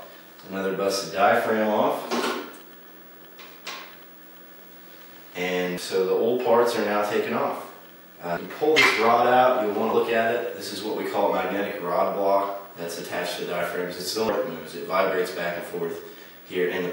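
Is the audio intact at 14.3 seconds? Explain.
No. At 14.29 s compressed frames are skipped: about 300 ms of audio never plays, a jump that fits roughly seven 32 ms frames. The audio jumps ahead past the missing frames, with no inserted silence, unlike a dropout.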